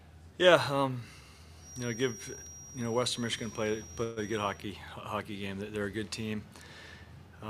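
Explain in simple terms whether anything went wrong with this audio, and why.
A feedback whistle runs from 1.56 to 4.69 s, likely because sound from a loudspeaker was leaking back into the microphone and circling just short of howling. That keeps one high tone near 5.7 kHz ringing as a thin, faint whistle behind the audio, swelling and fading slowly.

A call audio freeze hits from 4.03 to 4.19 s, likely because data packets were delayed on the way and the receiver ran out of audio to play. It filled about 0.13 s with a fading stretch of the last sound, then carried on where it stopped, losing nothing.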